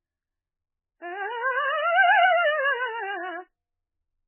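A very low-bitrate encode, likely heavy MP3 compression at a rate pointing to around 8 kbps, runs through this music clip, cutting everything above 3 kHz. The encoder starves weak frequency lines, so the sound turns dull, watery and swirly, with smeared attacks throughout.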